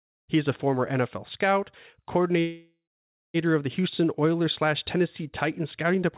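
From 2.4 to 3.37 s there is a call audio freeze, likely caused by packets stalling in transit so the jitter buffer ran dry. The last sound is stretched into a fading buzz that drops to silence for about half a second. The speech then resumes intact, about 0.94 s late, still band-limited to 4 kHz by the call path.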